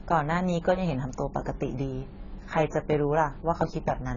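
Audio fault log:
Throughout: AAC compression, heavy and likely the cause of the dull, smeared speech. Nothing comes through above about 7 kHz, and sibilants have that fizzy, warbling edge, which fits a low-bitrate AAC-LC encode around 16 kbps quantising the spectrum hard and leaving gaps.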